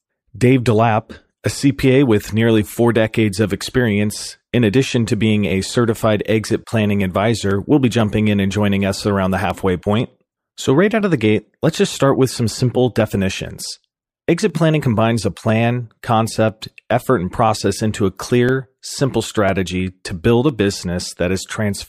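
Speech, and from about 6.01 s right through to 21.49 s there's a steady tick riding on it every 0.5 s, which points to periodic USB or driver dropouts. Something is blocking the bus or driver on a fixed schedule, and each time a tiny sliver of audio, roughly half a millisecond, just gets skipped rather than filled in. That splice leaves a small click, and you only catch it while there's sound going on, so it comes and goes with the talking.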